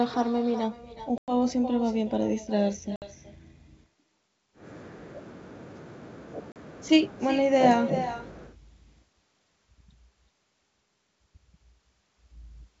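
Speech on a wideband G.722 call, clear up to about 7 kHz, carries echo with no canceller throughout. A quieter, thinner copy of every phrase returns about 0.4 s later, roughly 12 dB down. It is a late, distinct repeat rather than room reverberation, which would be a smeared tail attached directly to the sound. Packet loss on an ADPCM call cuts hard-edged silent holes at 1.18–1.35 s, 2.96–3.06 s and 6.52–6.57 s, with 100, 60 and 40 ms of audio missing. Unlike plain dropouts, the sound returns slightly distorted for a brief moment as the decoder's predictor re-locks.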